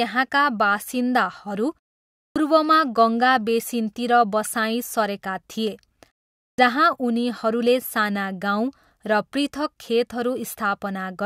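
Speech that twice loses the opening of a phrase after a short silence, a clipped start after a pause. At 2.22 s, after a 0.51 s gap, about 137 ms is swallowed, and at 6.46 s, after 0.43 s, about 123 ms goes, so each phrase begins abruptly without its first sounds. The output path has dozed during the gap and is still waking when sound resumes. Muted pauses differ because they silence only the gaps, and the silent pauses here lose no speech.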